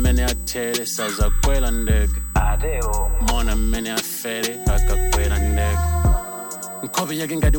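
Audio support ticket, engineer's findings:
USB whine, whole clip. Fixed-pitch tone at 8 kHz, strongest harmonic at 16 kHz, roughly 15 dB under the programme. Probable component: USB interface power/ground path; 125 µs microframe current draw coupling in. Not mains hum (no 50/60 Hz series), not switching-supply whine (pitch steady, not drifting): exact 8 kHz multiples point to the bus.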